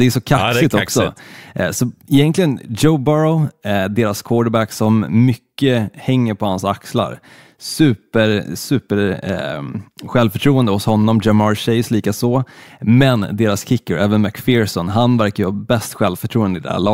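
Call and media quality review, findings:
No audible faults found in this speech recording.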